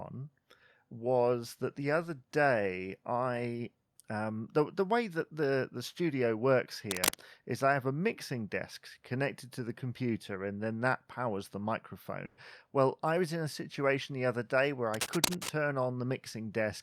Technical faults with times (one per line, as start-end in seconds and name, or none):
6.90-7.16 cable scratch noise
12.25-12.39 burst of packet loss
14.94-15.57 cable scratch noise